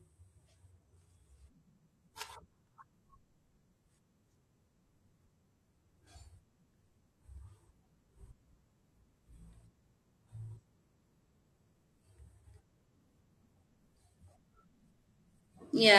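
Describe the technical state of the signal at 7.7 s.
At 7.7 s the speech is hit by damaged data in a compressed stream, from 7.66 to 7.71 s. Some of the stored frames are corrupt there. The decoder misreads them, loses sync and hunts for the next valid frame header. The result is a brief chirp or blip.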